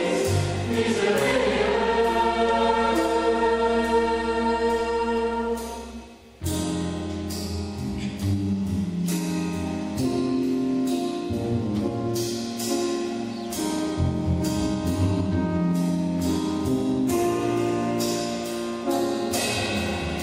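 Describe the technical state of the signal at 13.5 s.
At 13.5 s the signal is intact, with no audible dropout, distortion, clicks or other technical fault.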